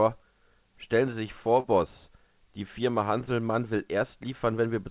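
At 1.6 s to 1.66 s there is a short concealed packet loss: about 40 ms of audio never arrived in time, so the receiver stretched the preceding sound to cover the gap before blending back into the real signal. It is heard as a brief smear or wobble. On a spectrogram, which shows nothing above 4 kHz from the G.711 call path, the gap appears as a short stretch where the preceding sound is continued rather than new detail.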